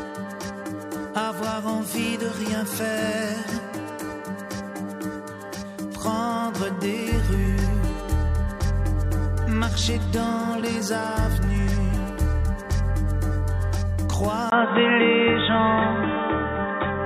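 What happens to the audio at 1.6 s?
Nothing goes wrong at 1.6 s: the audio runs through that moment intact, with no dropout, click or distortion.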